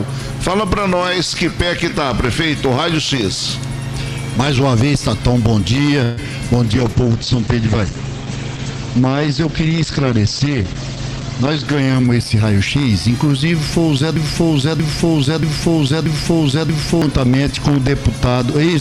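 At 6.03 s a call audio freeze, likely from packets held up in transit that drained the jitter buffer, stretches the last sound into a fading buzz or hiss for 0.14 s. The audio then resumes where it stopped, about 135 ms later.

From 6.64 s to 13.96 s a call bitrate drop cuts the encoder from 128 to 10 kbps, staying at the lowest rate for about 4.6 s. The sound turns coarse and muffled, with bandwidth falling from 20 kHz to 8 kHz.

Between 11.16 s and 12.83 s a jitter buffer speed-up trims short pitch-period pieces, about 150 ms in all. The audio runs at 107% speed, hurried but at unchanged pitch.

From 14.16 s to 17.02 s a broken-record loop, probably a stalled stream resending its last fragment, repeats a 0.63 s piece exactly, back to back, five times. The audio that should have played there is lost.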